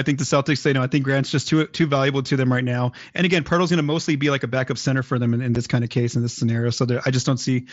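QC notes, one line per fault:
5.55 s, unconcealed Bluetooth headset packet loss: a 7.5 ms hole with abrupt edges in the speech, consistent with one dropped mSBC frame that was left unfilled.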